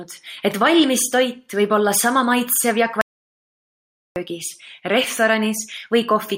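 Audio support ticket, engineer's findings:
Audio dropout to silence, 3.01–4.16 s: speech cuts to silence for 1.15 s, no room tone. Likely input device or link lost while the recorder kept writing zeros.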